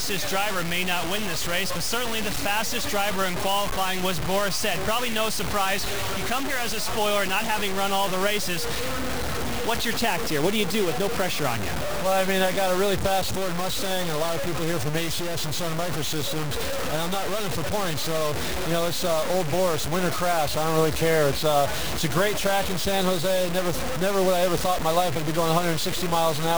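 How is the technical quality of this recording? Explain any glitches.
Poor: the whole clip carries heavy grainy distortion that tracks the sound, the signature of low bit depth without dither, likely 4-bit truncation with error nearly as loud as the signal.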